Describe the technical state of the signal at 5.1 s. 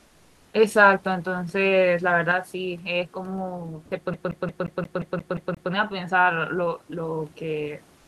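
At 5.1 s the signal is inside a CD stuck on one turn fault, running 4.14 to 5.72 s: a 176 ms segment repeats nine times with a brief mute at each laser jump. It is also affected by what sounds like one channel dropping out, from 2.32 s to the end. The level fell abruptly by about 6 dB, likely because one stereo channel was lost before the mono sum.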